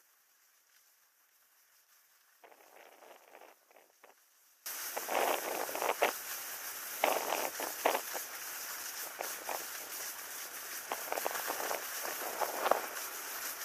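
Likely an upstream signal loss with the chain still live: an audio dropout to a faint residue from the start, abruptly restored at 4.66 s.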